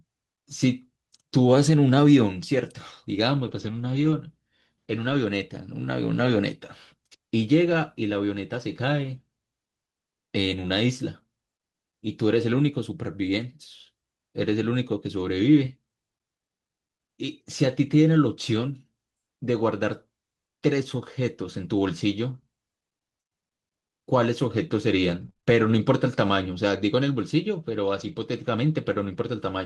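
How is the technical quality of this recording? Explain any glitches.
The speech has two kinds of packet-loss damage, early and late, over a call-codec sound whose top end stops near 12 kHz.

Lost packets rebuilt from error correction, at 3.43–4.13 s, 5.09–5.15 s, 6.17–6.35 s and 7.65–7.75 s: low-bitrate backup copies fill the holes, so nothing drops out, but the speech turns rougher and noisier.

Scattered short gaps, from 25.21 to 28.14 s: about five brief holes, the longest around 30 ms, are patched by extending the preceding sound. They cause momentary ticks or hiccups rather than sustained roughness.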